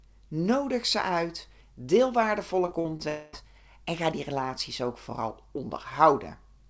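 Right after "ze uit deel", from 2.66 to 3.01 s, repeated packet loss (robotic sound) sets in. Four short holes, the longest 38 ms, are each patched by stretching the preceding sound, so about a quarter of this span is concealment. Unlike a single dropout, this sounds choppy, with brief fragments missing over and over.

From 3.09 to 3.35 s comes a different break, likely a long network dropout. Instead of several small holes, one continuous stretch of about 0.24 s is replaced by a smeared, buzzy continuation of the last sound. It never decays into silence before the audio resumes at "en ga die relaties", minus the lost portion. Throughout, the G.722 call path leaves nothing above 8 kHz.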